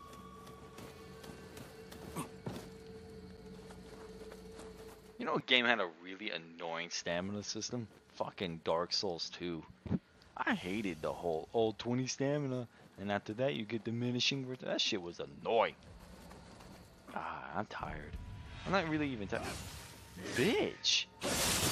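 At 3.37 s there's a gap between stream segments: two chunks of the stream don't quite butt up against each other in time, and the player fills the space with about 7.4 ms of digital silence. You hear it as a tiny, hard-edged dropout, a quick tick-like hole rather than a fade. Nothing is actually lost; the sound just pauses and picks up where it left off. The placement fits a boundary between segments of a few seconds each.

From 5.40 to 7.02 s the tone changes abruptly. Everything above 7.6 kHz vanishes, so the sound goes dull and a bit boxy, and a faint new background hiss appears well under the signal. There's no silence at the changeover and no real jump in loudness. The sound then opens up again just as suddenly at 7.02 s. That pattern is most likely the input switched to a poorer device for that stretch, such as a narrower-band mic or a headset's call mode, before going back.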